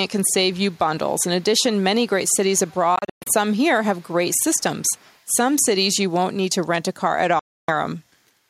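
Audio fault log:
0.52–0.79 s, 2.58–2.82 s, 3.95–4.37 s, 4.57–4.63 s, 4.8–5.24 s: echo leak, a faint copy of the speech returning about 175 ms late, roughly 30 to 35 dB down, likely from a loudspeaker echo canceller letting residue through.
2.96–3.30 s and 7.39–7.71 s: Bluetooth dropout, abrupt silent gaps where speech resumes further on as if it had kept playing; the first is broken into several holes, the longest about 122 ms, the second loses about 290 ms, likely from late wireless packets being discarded.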